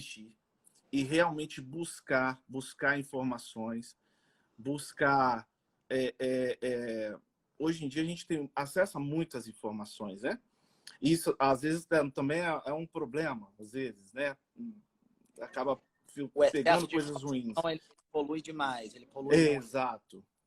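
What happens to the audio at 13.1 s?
A call bitrate drop spans 11.52 to 15.31 s; the encoder is starved of bits, consistent with roughly 64 falling to 25 kbps, so the audio turns coarse and muffled.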